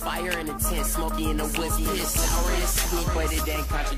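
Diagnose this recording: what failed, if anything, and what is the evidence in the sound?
Doubled audio track from 1.38 to 3.40 s: the sound is joined by a second full-band copy of itself trailing about 0.7 s behind and only a few dB quieter. It has no decay tail or room colouring, and it switches in and out abruptly at those times. The likely cause is a second capture or monitoring path, or a misaligned edit at the buffer or mixing stage, feeding the same signal into the mix a fixed delay late.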